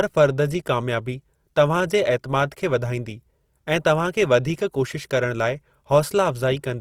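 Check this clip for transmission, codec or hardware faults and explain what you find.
The speech carries one codec fault, present from start to finish.

Throughout, the speech sounds rough and grainy, likely from Opus compression in its CELT mode, at a rate that fits about 24 kbps. Band energies are kept but fine detail is refilled with folded or noise content, so a spectrogram shows bands filled to 20.4 kHz, with speckled, smeared harmonics rather than holes.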